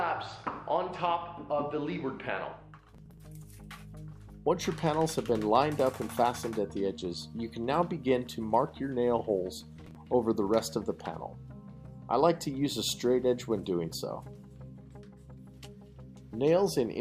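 A gritty burst of crackle tears through the sound from 2.88 to 3.25 s, and again from 9.58 to 10.10 s. This is processor overload crackle: the processor fell behind on its tiny audio buffers, each just a few milliseconds long, and missed many deadlines in a row. Each missed buffer was skipped, leaving a short hard-edged gap. The density of the clicks suggests around fifteen misses in the first burst and about ten in the second.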